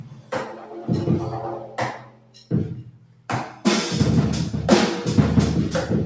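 Right through the clip a speech noise suppressor is working on non-speech sound, mistaking steady parts for noise, so levels pump by about 10 dB. The sound cut by the noise suppressor is clearest from 0.0 to 0.32 s, 0.53 to 0.69 s, 1.63 to 1.78 s, 1.94 to 2.52 s and 2.83 to 3.29 s, where held material sinks by up to about 11 dB.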